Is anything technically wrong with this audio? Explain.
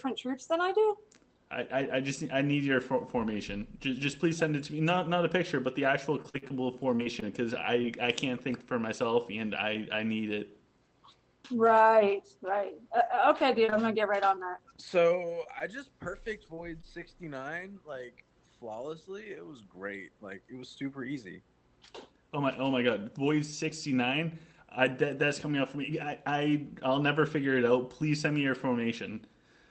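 Yes, there are two packet-loss faults, both heard through a call-codec path whose audio stops around 8 kHz.

From 6.05 to 7.85 s there is repeated packet loss (robotic sound). Nine dropouts arrive in close succession, the longest 44 ms. Each hole is filled by the receiver stretching the last piece of sound, and about 12% of the stretch is this patched material. The result is choppy. On a spectrogram it shows as smeared, flat-topped harmonic bands with abrupt breaks. The waveform has repeated, overly regular cycles where the natural envelope should vary.

From 13.41 to 16.85 s there are scattered short gaps, about ten of them, spread out rather than clustered, and none longer than about 20 ms. Only around 4% of that span is concealed, so the sound stays clear, with brief ticks and small hiccups where the receiver continued the previous sound over each hole. A spectrogram shows isolated thin vertical seams or momentary smears. 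The waveform has tiny discontinuities or short repeated cycles at each spot.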